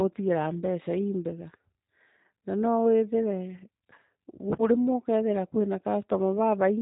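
It's a speech clip with G.729 codec damage running the whole way through, plainly audible as that rough, slightly synthetic, buzzy quality of low-rate voice coding. It sounds like G.729A at around 8 kbit/s, and there's nothing above 3.8 kHz.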